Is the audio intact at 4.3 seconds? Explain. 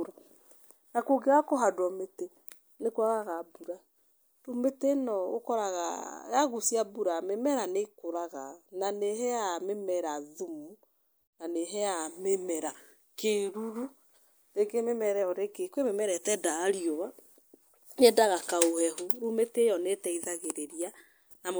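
Yes, the speech at 4.3 seconds is intact, with no dropout, click or other fault at that moment.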